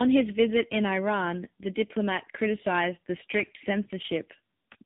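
Speech, with tandem speech coding throughout: it sounds rougher, more muffled and more warbly than one narrowband coder would, with nothing above 3.8 kHz. That stacked degradation, rather than one codec's clean artefacts, points to two speech coders in a row, likely a CVSD link followed by AMR-NB at 6.7 kbit/s.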